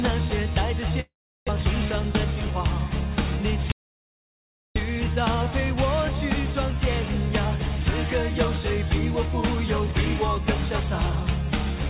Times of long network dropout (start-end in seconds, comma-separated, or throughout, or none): 1.00-1.51